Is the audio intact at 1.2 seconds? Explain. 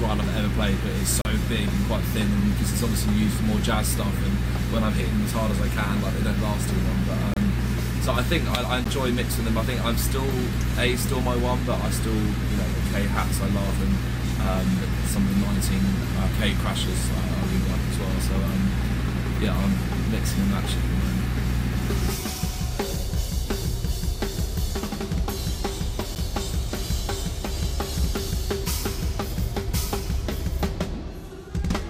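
No. From 1.21 to 1.25 s there is a block of digital silence about 36 ms long: a run of silent samples, as happens when the output buffer is not filled in time or a calculation yields invalid values. The sound stops dead and restarts with no fade, and the gap between is heard as a brief hole. Those abrupt edges and silence distinguish it from a faded dropout or a concealed loss.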